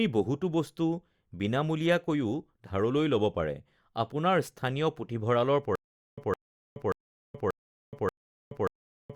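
A speech recording that breaks into a stutter with silent gaps from 5.75 s to the end. The same 0.16 s fragment plays five times, each followed by about 0.42 s of digital silence, so it repeats every 0.58 s. The likely cause is a stalled player or stream replaying its last buffer on each retry and then running dry. The dead-silent gaps and rigid timing separate it from a seamless loop or random dropouts, and the speech that should fill that stretch is lost.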